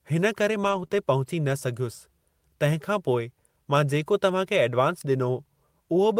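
Several packets went missing just after "हिन करे", but each following packet carried a low-bitrate spare copy, so from 0.63 to 0.85 s the decoder played those copies instead of leaving a hole. This is lost packet rebuilt from error correction. About 120 ms of speech comes out coarser and grainier, which fits roughly six 20 ms packets replaced by their backups. The same thing recurs from 0.92 to 0.94 s, where a single 20 ms stretch is rebuilt the same way and briefly turns rough again.

Between those two repairs, one packet arrived too late and had no usable copy. The receiver covered the 20 ms hole by extending the preceding sound for about 22 ms before fading back into the real signal. This is short concealed packet loss, running from 0.87 to 0.92 s. It shows up as a quick smear or wobble in the speech, with the original detail of that instant gone.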